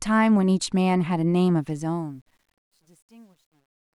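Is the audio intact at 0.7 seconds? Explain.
Yes, the audio is intact at 0.7 seconds, with no fault at that moment.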